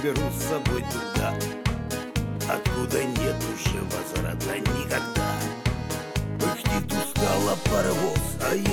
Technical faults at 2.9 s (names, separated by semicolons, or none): none